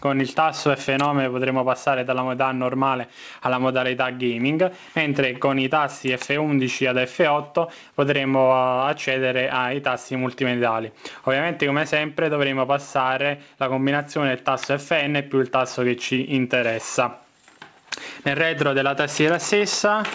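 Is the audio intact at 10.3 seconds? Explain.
Yes, the audio is intact at 10.3 seconds, with nothing there beyond the ordinary band limit of the call path, which leaves no content above 8 kHz.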